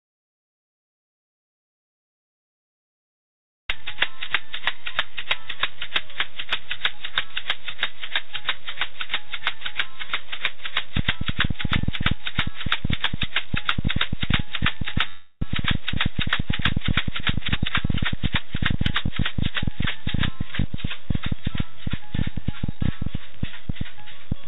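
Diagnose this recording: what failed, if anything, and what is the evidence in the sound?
Audio dropout to silence, input stage: the clip opens already silent and stays silent until 3.69 s, when the sound starts mid-flow. The waveform is a flat line and the spectrogram is blank, with no room tone. This likely means the input device or link was lost while recording continued.

Train of clicks, analogue wiring or interface: from 10.97 s to the end, irregular ticks arrive at about 10 per second, peaking about 5 dB above the sound and audible in pauses too. A spectrogram shows thin vertical broadband lines, and the waveform shows sharp spikes. Interference or a struggling interface is the likely source.

Call audio freeze, network and jitter buffer: at 15.08 to 15.44 s, late packets likely emptied the buffer. The receiver extended the last sound for 335 ms as it faded, ending in about 50 ms of silence, then resumed where it stopped with nothing lost. 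The spectrogram shows a smeared, decaying stretch capped at 4 kHz like the rest of this G.711 call.

Jitter buffer speed-up, call processing: from 17.11 to 19.55 s the audio runs at 114% speed with unchanged pitch and sounds hurried. The receiver cut repeated pitch-period slices, about 0.3 s in total, to shed excess buffered delay. Events look compressed in time on a spectrogram while their frequencies stay put.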